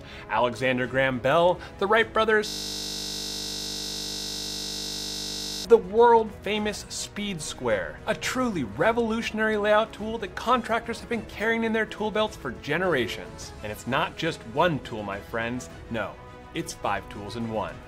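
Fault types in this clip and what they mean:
system hang loop: the system froze while the hardware kept replaying one 20 ms buffer, so from 2.48 to 5.65 s the sound becomes a steady 50 Hz buzz; the waveform shows one identical cycle repeating, the spectrogram flat lines at multiples of 50 Hz.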